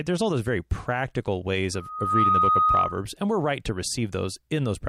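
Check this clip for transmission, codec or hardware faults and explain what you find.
There's one clear problem here: a loudspeaker feedback squeal running from about 1.74 s to 3.05 s of the speech. A steady tone near 1.2 kHz creeps in and swells over roughly half a second until it's sitting a few dB louder than the talker, then holds there as a piercing whistle. What's happening is that the mic is hearing the speaker it feeds, and at 1.2 kHz the loop gain tips past one, so that frequency keeps feeding itself and builds on its own.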